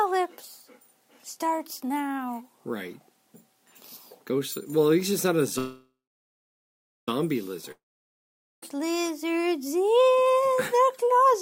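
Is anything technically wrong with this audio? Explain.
Yes, there are two interruptions.

From 5.58 to 7.09 s there is a call audio freeze. The last sound carries on briefly as a fading buzz, then about 1.13 s of silence. Packets were likely held up until the jitter buffer emptied. Playback resumes where it stopped, nothing skipped but now 1.49 s late.

From 7.72 to 8.63 s there is a long network dropout. The sound decays into roughly 0.83 s of silence. When audio returns, about 0.91 s of material is gone, likely because those packets never arrived.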